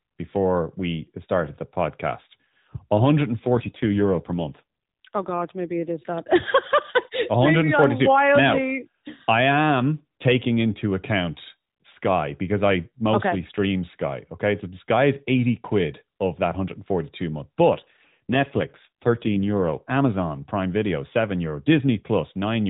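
A speech clip carried over an AMR-NB narrowband mobile link, with nothing above 4 kHz. AMR rate drops occur from 3.40 to 5.91 s, ending just before "is that", and again from 17.70 to 19.84 s. The voice turns buzzy and synthetic, which fits the codec falling from 12.2 to 5.9 kbps. The spectrogram shows the same 4 kHz ceiling with blurred harmonics and no gap in the waveform.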